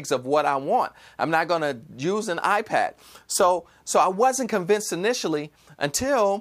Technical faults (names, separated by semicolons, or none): none